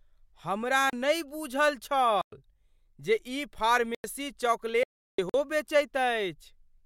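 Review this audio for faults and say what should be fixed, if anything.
The speech contains four blocks of digital silence: 0.90–0.93 s (about 32 ms) just before "नहि बूझल", 2.21–2.32 s (109 ms) right after "हमरा नहि बूझल", 3.95–4.04 s (93 ms, fitting a 4096-sample buffer) and 5.29–5.34 s (46 ms, fitting a 2048-sample buffer). Each is most likely an output buffer left unfilled and zeroed, with the sound cutting out and back with no fade. Prevent this by giving the audio thread enough buffer headroom and priority that it never underruns.

An audio dropout to silence runs from 4.83 to 5.18 s, about 350 ms of total silence with no room tone, cutting in and out mid-flow. The input was likely lost briefly while recording continued writing silence. Prevent this by securing the input connection and monitoring the live signal during capture.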